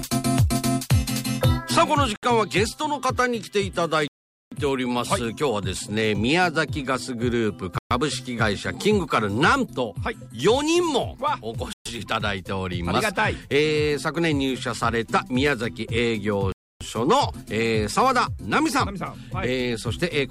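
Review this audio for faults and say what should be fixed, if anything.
The audio drops to dead silence five times and then resumes: at 2.16 to 2.23 s (68 ms), 4.08 to 4.52 s (440 ms), 7.78 to 7.91 s (125 ms), 11.73 to 11.86 s (126 ms) and 16.52 to 16.81 s (286 ms). These are likely Bluetooth stalls, where radio interference delays packets, the headphones' buffer empties, and playback waits for retransmissions. Moving the phone closer to the headphones, away from congested 2.4 GHz sources, should prevent them.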